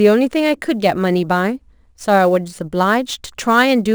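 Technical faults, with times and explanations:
Throughout, sample clock jitter: the converter's timing wanders by around 7 microseconds, so each sample lands slightly off its proper instant, and the error follows the waveform's slope. Steep fricatives and loud vowels pick up a grainy hiss roughly 30 dB below the speech, which disappears in pauses. On a spectrogram, faint broadband noise rides along with the voiced energy, densest in the upper bands, and leaves gaps clean; the waveform looks subtly fuzzed.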